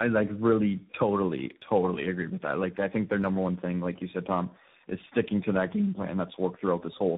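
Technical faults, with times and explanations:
Throughout, tandem speech coding: the speech sounds rough, muffled and warbly, with nothing above 3.8 kHz. It passed through three speech coders in a row, which fits two AMR-NB stages and a final CVSD stage, each re-coding the previous coder's already degraded output.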